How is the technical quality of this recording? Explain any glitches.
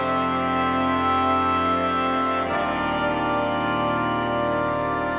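No glitches can be heard in the recording, and the sound carries the narrow telephone-band character of a call path, with nothing above 4 kHz, which fits a G.711 A-law link at 64 kbps.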